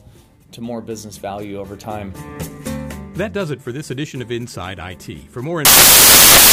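Right at 5.65 s the audio collapses into loud, harsh broadband noise, and it stays that way until the clip ends at 6.52 s. That's samples built from the wrong bytes: the reader is assembling each sample incorrectly, whether it's off by a byte, has the byte order swapped, or assumes the wrong alignment. The fast-changing low bits end up as the big part of every value, so the sound turns into noise.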